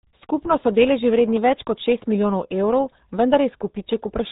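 Throughout the speech, the RealAudio 14.4 codec damage is heavy. Everything above 3.8 kHz is gone. The voice sounds muffled and gargly. This fits an 8 kbit/s dial-up codec, squeezing speech into very few bits per second and smearing its detail.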